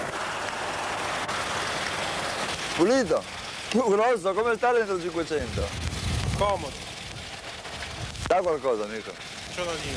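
No technical faults are audible.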